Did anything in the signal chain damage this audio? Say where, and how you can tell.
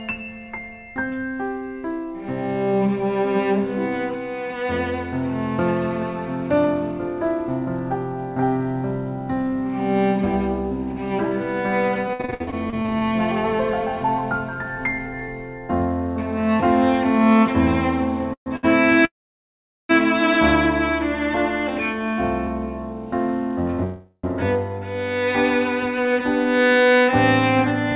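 Yes. The damage is at the network and jitter-buffer stage of the call path.

Repeated packet loss (robotic sound) runs from 12.08 to 13.04 s. The sound turns choppy, with pieces missing. Thirteen holes are patched by repeating the last sound, covering 38% of that stretch. The longest hole is 60 ms, and about 220 ms is lost outright.

Jitter buffer speed-up occurs from 14.56 to 15.28 s and again from 25.98 to 27.92 s. The audio runs faster at unchanged pitch, at 109% and then 103% speed. Each time the receiver cuts about 70 ms in pitch-period slices to shrink excess buffered delay.

Call audio freeze occurs at 18.33–18.48 s, 19.05–19.91 s and 23.84–24.25 s. Each time the last sound is stretched into a fading buzz or hiss. It then goes silent for 90 ms, 790 ms and 10 ms respectively. The audio resumes where it stopped, with nothing missing. The likely cause is held-up packets draining the buffer.

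A short stall from a late packet occurs at 18.56–18.65 s. One sound is held for 70 ms with a slight buzz or dip, then continues from the same spot. Nothing is lost. The buffer briefly ran dry while one packet arrived late.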